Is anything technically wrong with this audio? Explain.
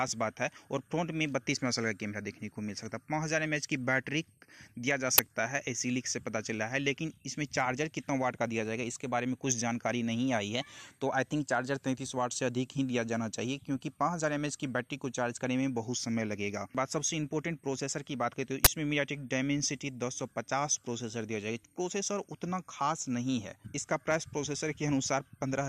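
Yes. Two short, harsh bursts of loud digital noise cut through the audio, one at 5.18 s lasting about 10 ms and another from 18.65 to 18.67 s lasting about 20 ms. This is an uninitialised buffer fault. Playback took a block of memory before any audio had been written into it, so whatever leftover data sat there was played out as raw samples, producing a sudden, loud burst of noise for the length of each block.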